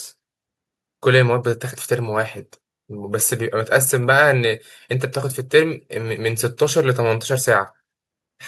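A short bit of speech, and there's nothing technically wrong with it that needs pointing out.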